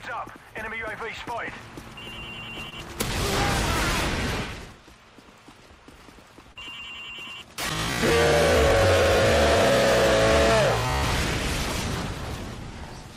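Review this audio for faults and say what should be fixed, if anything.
Short concealed packet loss occurs twice, from 2.69 to 2.74 s and from 6.52 to 6.57 s. About 20 ms and then 40 ms of audio failed to reach the decoder in time. The receiver bridged each hole by extending the preceding sound, then blended back into the real signal, leaving a brief smear or wobble. Unlike a plain dropout, there is no silent gap or hard click, only a soft, synthetic-sounding patch. A larger jitter buffer or forward error correction on the link would prevent these.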